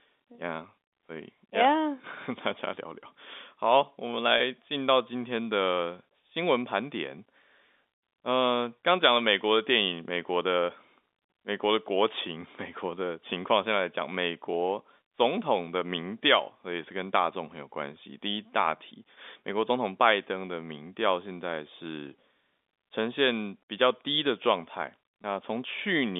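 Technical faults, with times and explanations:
4.38–4.40 s, 22.08–22.10 s, 25.22–25.24 s: packet loss with pitch repetition. Each gap, fitting one lost 20 ms packet, was bridged by repeating the last pitch period, giving a brief held, buzzy blip.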